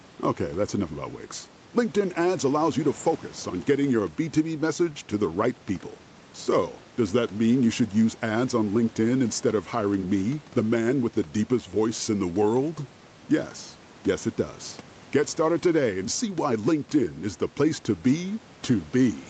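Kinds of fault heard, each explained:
Nothing in this speech clip counts as a fault; the room noise sits about 26 dB below the speech, and the call path tops out at 8 kHz, just as an Opus call at that bandwidth would.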